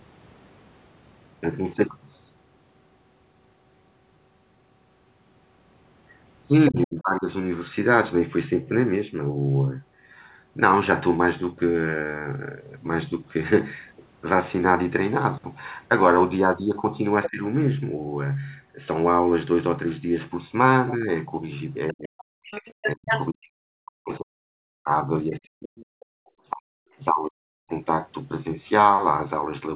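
When both ends talk at once, the echo canceller likely fails to tell the talker from loudspeaker echo, causing speech suppressed in double talk: the speech dips by about 25 dB at 6.69–7.29 s, 15 dB at 17.27–17.43 s and 10 dB at 20.94–21.10 s, then drops in pieces, up to about 40 dB, across 21.92–27.71 s. Residual echo likely escapes cancellation, letting the other side's voice leak through as brief scraps at 17.23–17.29, 21.88–21.93 and 26.00–26.05 s, and more strongly, only about 5 dB under the speech, at 22.51–23.29 s.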